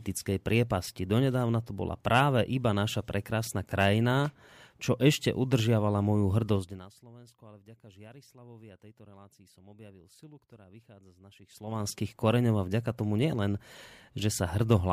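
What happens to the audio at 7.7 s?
Nothing goes wrong at 7.7 s: the speech carries on intact there.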